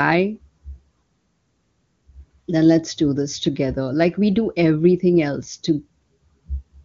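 No technical faults are audible anywhere in this speech.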